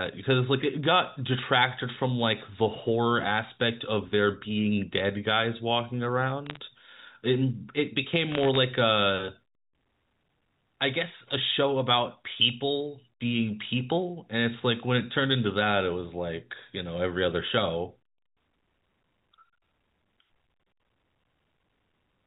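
A phone-line speech recording in G.711 A-law, so everything tops out at 4 kHz. The fault is bit errors on a digital phone line, heard as two bursts of sharp ticks and crackle from about 6.46 to 6.57 s and again from 8.32 to 8.57 s. Each flipped bit knocks a single sample off, and hits on the sign or upper bits jump hardest. The second burst is longer and denser, which fits an error rate around half a percent rather than a few tenths.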